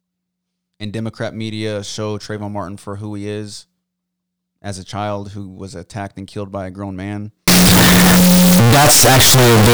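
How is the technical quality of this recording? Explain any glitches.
The recording has one serious glitch in its final stretch. From 7.48 s to the end at 9.74 s, right after "by a grown man", the speech turns into a very loud, harsh, buzzing sound. This is a float read as integer fault. The likely cause is that 32-bit floating-point samples were read as 32-bit integers, so each sample's sign and exponent bits set its level. Quiet passages and loud ones come out equally strong, and background noise rises to match the speech. The pitch still comes through. On a waveform this section looks like a dense, nearly square block at an almost fixed, high level. On a spectrogram it shows as bright broadband energy filling the whole frequency range.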